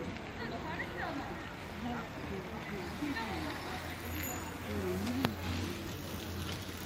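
A recording of everyday sounds, with nothing technically wrong with it.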